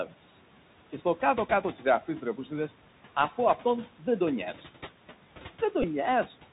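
A speech recording carried over a Bluetooth headset link shows three kinds of fault. First, the audio passed through the narrowband Bluetooth CVSD headset codec, which fits a 64 kbps CVSD link. Each sample becomes a single up-or-down bit with an adaptive step, so everything above 4 kHz is gone and the speech sounds boxed-in and band-limited. The codec damage is plainly audible: loud, bright passages outrun the step size and crackle, sibilants turn scratchy, and a grainy hiss sits under the speech for the whole clip. Second, there are noise suppressor artifacts throughout. A frame-by-frame suppressor pulls down whichever bands it judges to be steady noise, cutting the background by about 12 dB. The room noise, which sits about 19 dB below the speech, therefore drops away in the pauses and comes back under the talking, so the floor pumps. Third, from 5.82 to 5.85 s, a Bluetooth headset packet was repeated. 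Voice packets between headset and phone were lost, and the chip decoded the previous packet's bits again, filling about 11 ms, which fits three lost 3.75 ms packets. Because the same short packet recurs every 3.75 ms, the gap becomes a brief mechanical buzz near 267 Hz until clean packets resume.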